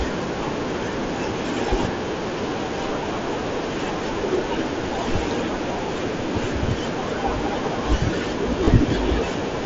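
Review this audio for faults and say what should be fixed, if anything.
Concealed Bluetooth headset packet loss at 8.65 to 8.68 s: about 22 ms of headset packets were lost, fitting three frames, and the phone filled the gap by repeating the closest-matching recent stretch of waveform, leaving a brief buzzy hold. Keeping the headset close to the phone, with no obstructions or competing 2.4 GHz traffic, should prevent these dropouts on the mSBC link.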